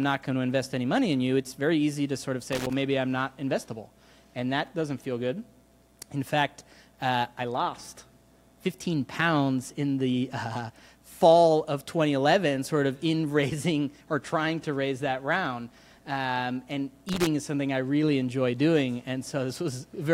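Around 2.52 to 2.73 s, and again from 17.09 to 17.27 s, there's a short burst of loose connector crackle, each about a fifth of a second. A worn contact keeps making and breaking, chopping the signal into irregular scratchy pops.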